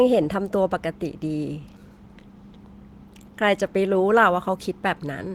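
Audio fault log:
Nothing stood out on listening to this speech recording.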